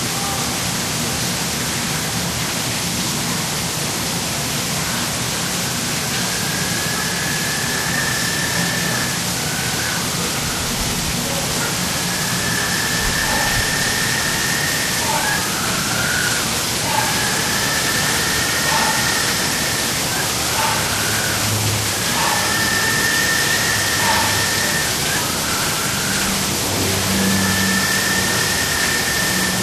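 A recording of sounds, with MP2 compression damage throughout the clip. The top end is dull. Upper frequency bands seem to drop in and out, so the high detail flickers. What remains has a gurgling, granular roughness. The likely cause is MPEG Layer II encoding at too low a bitrate. The coder splits the sound into 32 sub-bands and starves the upper ones of bits. The damage is plainly audible, which fits a rate of around 80 kbps.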